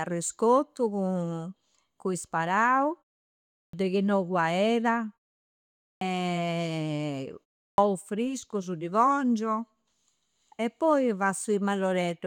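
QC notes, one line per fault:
3.68 s, 5.96 s, 7.73 s: clipped start after a pause. The output sleeps in silence, so each onset loses about 50 ms and starts abruptly.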